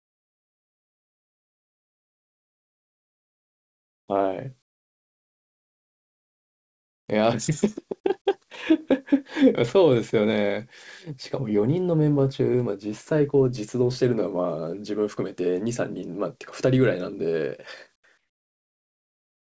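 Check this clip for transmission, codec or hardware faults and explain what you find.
Three kinds of fault are present: comfort noise replacing the background, a jitter buffer slow-down, and a jitter buffer speed-up. The audio is speech, and nothing is heard above 8 kHz, which fits a wideband call codec.

Comfort noise in place of the background, 0 to 4.08 s and again at 17.96 to 18.04 s. The real background gives way to a flat, featureless hiss. It drops about 26 dB in the first stretch and about 19 dB in the second. The likely cause is discontinuous transmission: the sender paused during silence, and the receiver filled the gap with synthetic noise.

Jitter buffer slow-down, 4.12 to 4.31 s. The receiver's buffer ran short. It repeated pitch periods to rebuild its reserve, adding 41 ms. Playback drops to 82% speed at unchanged pitch. Sounds stretch out briefly, with a slight drawn quality.

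Jitter buffer speed-up, 7.16 to 8.09 s. The buffer held more audio than it needed. The receiver trimmed short pitch-period pieces, about 40 ms in all. Speech runs at 104% speed without a pitch change.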